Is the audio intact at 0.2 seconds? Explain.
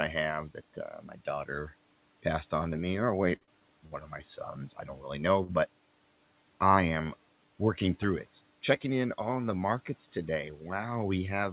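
Yes, the audio is intact at 0.2 seconds, with no fault at that moment.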